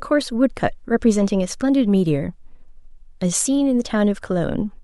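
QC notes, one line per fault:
Nothing to flag here; I couldn't hear any technical problems anywhere in the recording.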